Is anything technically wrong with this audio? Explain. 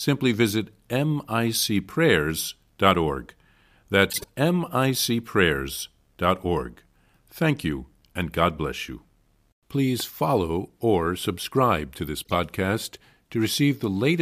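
Yes. There is a corrupt frame decoded fault at 4.10–4.28 s and again at 12.24–12.34 s, right after "or subscribe to this." Damaged compressed frames were decoded anyway, so misread gains put energy at the wrong frequencies. Each event is heard as a short chirpy burst and shows on a spectrogram as blocky, frame-shaped smears, peaking at about -15 dBFS and about -20 dBFS respectively.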